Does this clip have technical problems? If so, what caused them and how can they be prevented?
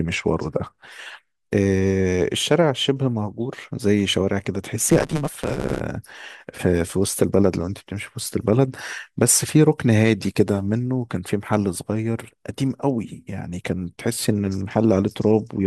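Yes. Block size mismatch (truncated), 4.88 to 5.80 s: each block's tail is discarded, giving a 150 Hz buzz and speech running 1.6 times faster at near-normal pitch, consistent with 512-sample writes. Matching the block sizes of the writing and reading stages prevents it.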